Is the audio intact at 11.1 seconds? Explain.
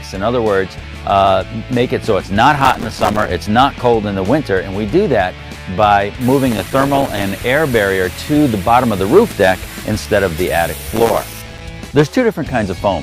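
No. From 10.92 to 11.61 s there is processor overload crackle. Dozens of buffers of a few milliseconds each miss their deadlines and drop to silence, leaving hard-edged gaps heard as gritty crackle. The waveform shows rapid notches, and the spectrogram shows dense vertical broadband streaks.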